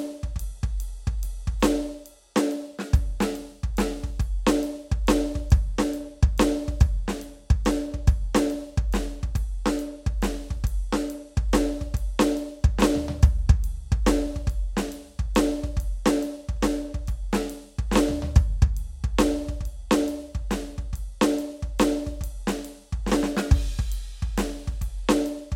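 No technical faults can be heard anywhere in the music, so there is nothing to describe in time order.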